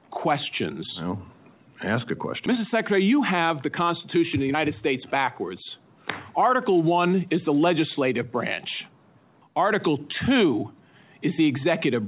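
A skip ahead at 2.46–2.48 s drops roughly 0.7 s of audio with no fill, so the sound jumps forward and the two sides of the cut are joined almost directly. Jitter buffer speed-up follows from 2.55 to 5.19 s at 108% and again from 5.79 to 7.50 s at 107%. The receiver trims short pitch-period pieces, about 0.2 s and 0.15 s in total, so the sound runs hurried at an unchanged pitch. Throughout, the call path's band limit leaves nothing above 4 kHz, which fits G.711 mu-law at 64 kbps.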